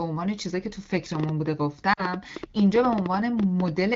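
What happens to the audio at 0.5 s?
Nothing goes wrong at 0.5 s: the speech carries on intact there, with only the light coding character of AMR wideband (HD Voice) at 12.65 kbit/s.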